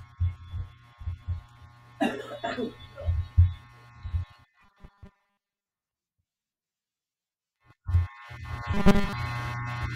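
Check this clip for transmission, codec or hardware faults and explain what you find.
Two faults are present, both robotic sound from repeated short buffers, at 4.61 to 5.68 s and 8.74 to 9.13 s. Audio likely arrived too seldom, so a fragment of about 5 ms was looped in place of most of the real speech, forcing a rigid 200 Hz metallic buzz. A spectrogram shows flat harmonics spaced at 200 Hz; the waveform shows one short cycle repeating.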